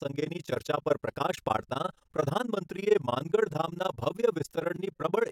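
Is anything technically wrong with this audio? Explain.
Yes. Throughout the speech there is overlap-add ripple: the frames were windowed and recombined with an overlap whose gains don't sum evenly, so level dips by about 60 dB once per frame, around 20 times a second, giving a fast, rough flutter.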